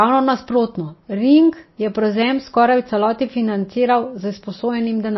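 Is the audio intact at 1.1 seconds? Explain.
No. At 1.1 s, as throughout the speech, nothing is heard above 5.8 kHz and the sound is watery and swirly, likely MP3 compression at a low bitrate around 24 kbps, where weak frequency lines switch on and off between frames. A plain low-pass filter would dull the sound without that swirl.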